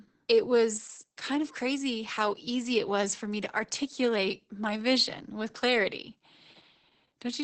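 From start to end, the speech carries Opus voice compression. Nothing sounds above about 8.5 kHz, so the top of the band is gone. That fits wideband SILK coding, where a linear-prediction model rebuilds the voice from a coarse excitation signal. The damage is heavy, which points to a bitrate near 10 kbps. The speech sounds muffled and hoarse, with a slightly robotic, buzzy edge where the excitation detail has been thrown away.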